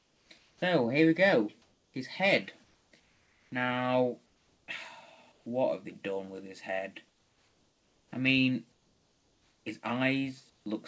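Comfort noise in place of the background fills the pauses at 0.0–0.62, 1.62–1.94, 2.64–3.52, 4.26–4.68, 5.32–5.46, 7.08–8.12, 8.72–9.66 and 10.50–10.66 s. Where measured, each gap holds a steady, featureless hiss about 2 to 5 dB quieter than the real background, which sits roughly 40 dB below the loud passages. On a waveform these stretches are flat and uniform. On a spectrogram they show smooth, unchanging noise, cut off at 8 kHz like the rest of the audio. This likely comes from discontinuous transmission, where the receiver synthesises noise while the sender stays silent.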